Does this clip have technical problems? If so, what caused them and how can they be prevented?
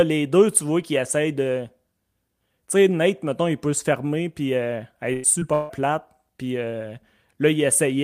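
Yes. A burst of packet loss runs from 5.13 to 5.26 s. About 100 ms of audio never arrived, and the receiver stretched the last sound to fill the gap, fading it as it went. On a spectrogram the continued sound runs flat and dim, and the waveform shows a smooth, decaying repeat. Larger jitter buffers and forward error correction let the receiver recover short bursts like this.

Short concealed packet loss appears at 5.40 to 5.43 s. Only about 20 ms went missing, and the receiver patched it with a continuation of the preceding sound before blending back in. It heard as a quick smear, and the spectrogram shows a narrow blurred column. Redundant audio packets or in-band FEC would cover gaps this small.

From 5.53 to 5.71 s, about 160 ms of sound is replaced by a held, fading continuation of what came just before, with no fall to silence. The cause is likely a long network dropout that stopped audio from arriving. 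Spectrograms show a frozen, decaying band, and the waveform shows a repeating, shrinking pattern. A more stable connection, such as wired rather than congested Wi-Fi, would prevent stalls like this.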